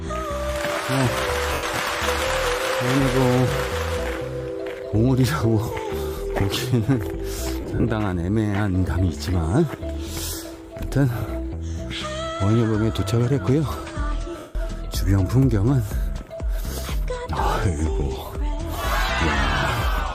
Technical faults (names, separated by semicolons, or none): lost LE Audio frames